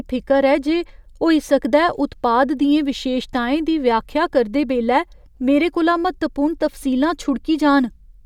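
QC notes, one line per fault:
No faults found.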